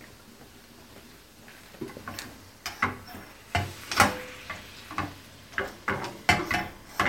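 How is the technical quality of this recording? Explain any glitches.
Nothing stood out on listening: no glitches or technical problems were heard anywhere in the recording.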